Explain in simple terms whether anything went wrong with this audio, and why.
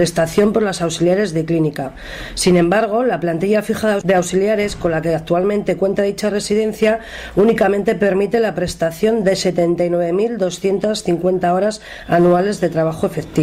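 Nothing went wrong; no faults can be heard.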